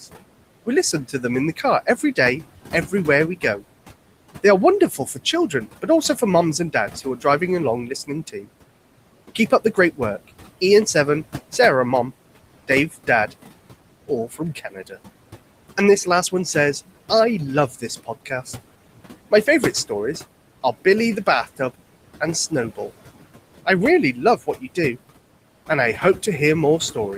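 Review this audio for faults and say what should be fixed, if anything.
Noise suppressor artifacts run through the whole clip. The suppressor pulls down bands it judges to be steady noise by about 18 dB, frame by frame. The room noise, sitting about 15 dB below the speech, therefore dips in the gaps and swells back under each phrase. A gentler reduction depth with slower gain smoothing would keep the background steady.

Speech cut by the noise suppressor occurs in three stretches: 0.01 to 11.59 s, with roughly a second of speech affected in total and drops of up to about 17 dB; 12.68 to 14.97 s, under half a second affected, up to about 13 dB; and 17.7 to 27.17 s, again up to about 17 dB. Quiet consonants and word endings are classed as noise and attenuated along with the background, so they sound clipped or swallowed. Lowering the suppressor's aggressiveness or raising its speech-presence sensitivity would protect these low-level speech components.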